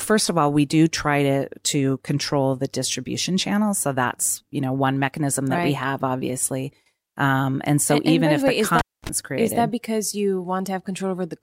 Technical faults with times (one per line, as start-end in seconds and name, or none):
8.79-9.09 cable pulled and plugged in